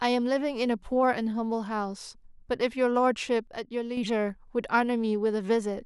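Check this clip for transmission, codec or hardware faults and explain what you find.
There is one fault: a channel dropout from 3.47 s to 3.97 s. For that half second the speech falls abruptly by about 6 dB and then returns at full level. The likely cause is one stereo channel going silent. Once the two channels are summed to mono, material common to both loses half its amplitude, and anything carried only by the lost side vanishes. The level drop alone doesn't tell it apart from a gain dip, but the fixed 6 dB step and the hard edges do: the sound never fades into silence as a true dropout would.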